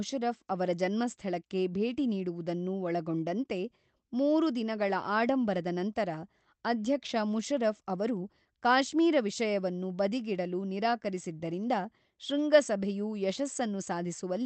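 No technical faults can be heard in the speech, which comes through a call path that behaves as a normal Opus connection would, with its top end extending to about 8 kHz.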